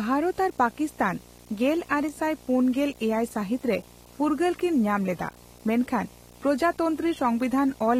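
Video or display buzz runs through the whole of this speech clip, sitting roughly 25 dB below the talker. A screen or video cable is coupling into the audio path, putting a buzz at the 60 Hz picture field rate with harsh hash stacked above it.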